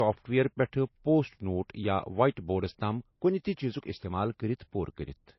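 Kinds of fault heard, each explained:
Low-bitrate audio saved at a high bitrate: the speech sounds dull and watery throughout, with nothing above about 5.8 kHz, which fits a very low-bitrate MP3 encode that was likely re-saved at a much higher bitrate that could not restore the lost detail.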